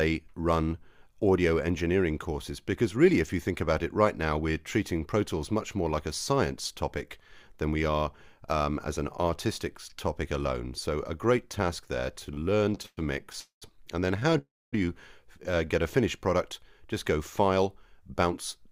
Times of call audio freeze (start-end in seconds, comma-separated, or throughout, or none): 13.40-13.64, 14.38-14.74